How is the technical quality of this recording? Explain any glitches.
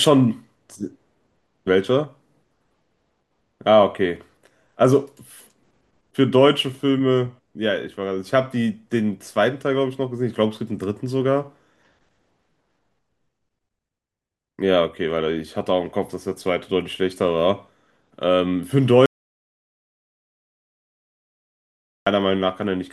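There's one real glitch here. From 19.06 to 22.07 s the speech drops out to silence, about 3 s of silence with no room tone at all, then cuts back in mid-flow. That's likely a lost input or stray mute while the recorder kept writing, so whatever was said there is gone.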